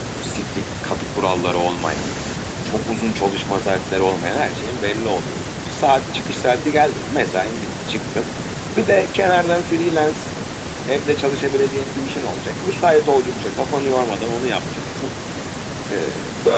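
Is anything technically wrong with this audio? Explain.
Yes. Throughout the speech, every phrase is trailed by a faint, hollow double arriving roughly a fifth of a second later, sitting about 28 dB below the direct speech. This is echo with no canceller. The far end is playing the call through a loudspeaker, its microphone captures that playback, and nothing subtracts it before it is sent back. The result returns after the network round trip as a thin, delayed shadow of the talker. The audio's top end stops near 8 kHz, consistent with the call codec in the path.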